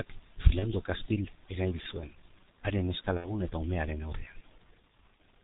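The whole clip carries G.723.1 codec damage, and it is heavy. The speech is band-limited below 4 kHz. It sounds muffled and hoarse. Consonants smear together. The coarse sound fits a very low rate near 6 kbit/s. The codec's slow-moving voice model cannot track quick changes.

At 0.59 to 0.73 s comes VoIP packet loss concealed by the speech codec. About 30 ms of audio went missing, which points to one lost frame. The decoder repeated its last pitch and filter at falling gain. The result is a short, fading sound. The sound stays weak after the gap.

At 3.18 to 3.50 s the same concealment returns, just before "eta umearen". About 60 ms was lost this time, which fits two frames. The concealed sound lasts longer and the distortion carries on past the gap.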